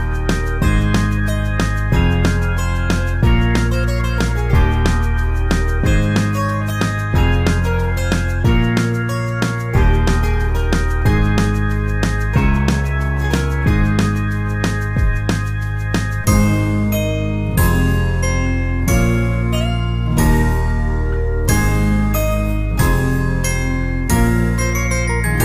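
No technical faults are audible anywhere in the recording.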